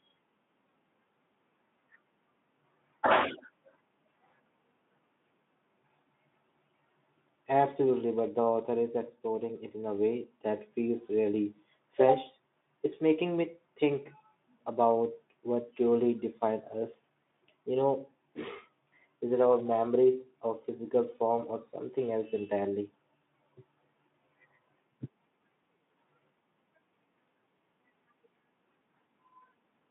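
Nothing stood out on listening to the speech in this recording.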